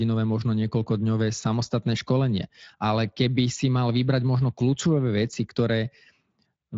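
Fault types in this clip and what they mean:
No faults in this clip.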